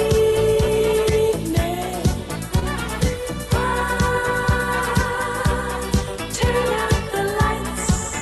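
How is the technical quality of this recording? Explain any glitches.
One glitch stands out: a short concealed packet loss between 2.59 and 2.64 s. It is heard as a brief smear or wobble, as if the sound momentarily stretches before blending back. About 20 ms of the call never arrived in time, so the receiver filled roughly 22 ms by extending the preceding sound, following its pitch where it was tonal or substituting shaped noise where it was not, then crossfaded back into the real signal. The audio around it passed through a call codec whose top end stops near 12 kHz, which points to Opus at a modest bitrate.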